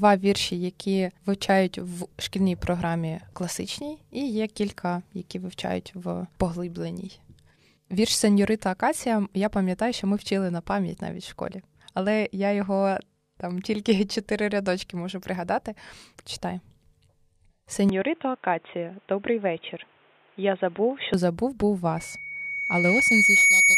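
From 17.89 to 21.14 s the speech abruptly turns dull and boxy, with nothing above 3.8 kHz and a faint new hiss well below the speech, though the level holds steady. This is likely the input switching to a poorer device, which clears just before "забув був".

From 21.97 s, after "забув був", a single 2.2 kHz tone swells over about a second and a half into a squeal roughly 10 dB above the speech, lasting to the end at 23.77 s. This is loudspeaker feedback squeal: the microphone picks up its own loudspeaker, and at that frequency the loop keeps amplifying itself.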